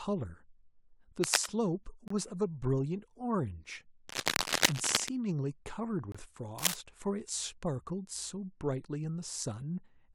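From 1.23 to 1.46 s there's a burst of cable scratch noise, a rough rustling that sits a little above the speech, likely from a worn lead or connector whose contact resistance flickers as it moves. It returns from 4.08 to 5.09 s and again from 6.58 to 6.74 s. At 2.08 and 6.12 s you get a gap between stream segments: a hard-edged hole of about 25 ms where the timestamps of consecutive 4-second segments don't quite meet and the player pads with silence.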